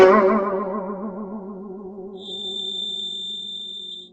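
Right from the start the music carries heavy Opus compression damage. Nothing comes through above about 8.5 kHz, so the top end feels closed in, and the tones have gone grainy and rough instead of ringing cleanly. There's little swirl, just a coarse, noisy texture where detail should be. That's the sound of the codec filling bands it can't afford to code properly, which fits a very low bitrate, likely around 12 kbps.

At 2.13 s a feedback whistle comes in and stays to the end: a thin, steady tone at 3.6 kHz, sitting roughly 10 dB under the music and swelling and fading slowly in level. It holds its pitch and never builds up, which is what you'd expect from a loudspeaker-to-microphone loop hovering right at the edge of feedback, likely the cause here.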